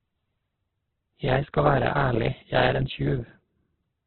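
Throughout, the speech sounds narrowband, rough and grainy, likely from heavy Opus compression. On a spectrogram, nothing appears above 4.5 kHz, and the bands below look noise-filled.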